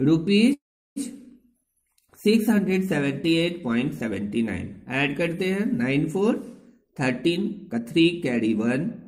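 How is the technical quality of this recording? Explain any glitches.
Two playback faults stand out. From 0.53 to 0.98 s there is a call audio freeze. The last sound is stretched into a fading buzz or hiss, then about 0.36 s of silence, likely from delayed packets draining the jitter buffer. From 6.76 s to the end there is a jitter buffer speed-up: the receiver trims pitch periods to recover latency, so playback runs at 115% speed with unchanged pitch, dropping around 0.4 s and sounding hurried.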